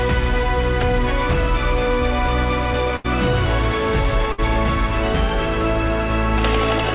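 At 2.96 s and again at 4.32 s there is a burst of packet loss. For about 80 ms, then about 60 ms, the receiver carries the last sound forward as a held buzz or hiss that fades, and playback resumes with that stretch of audio gone. Unlike a clean dropout to silence, each gap is filled with this smeared continuation rather than going dead. Throughout, nothing reaches above 4 kHz, which fits a G.711 call codec.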